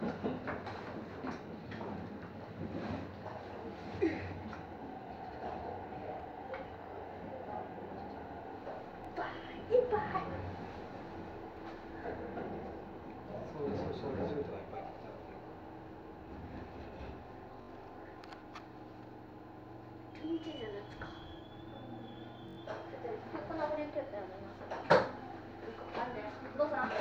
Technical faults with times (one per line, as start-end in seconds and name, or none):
9.05-9.07 repeated buffer
17.62-17.69 repeated buffer
22.49-22.57 repeated buffer